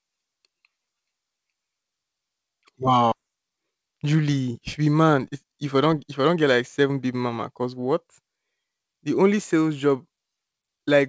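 At about 3.12 s roughly a second of speech was dropped while later audio was already waiting, producing a skip ahead. Playback then resumed from later audio with no filler, so the speech on either side of the cut is spliced almost directly. The listener hears an abrupt jump forward, as though part of the sentence vanished, with no gap to mark where it went.

From 3.21 s to 7.74 s the receiver was still holding more audio than its target, so it applied a jitter buffer speed-up. It repeatedly cut out short slices one or a few pitch periods long, shedding about half a second in total. Playback runs at 112% for that stretch while the pitch stays where it was, so the speech sounds rushed. Throughout the clip the band stops at 8 kHz, which fits a G.722 call codec.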